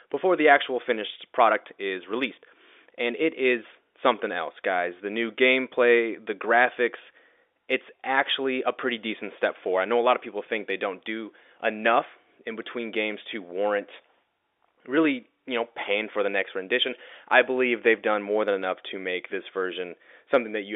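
Nothing faulty turns up in the speech, which runs over a G.711 telephone line confining it to about 300 Hz to 3.6 kHz, with the codec's level-following quantisation noise faint at most.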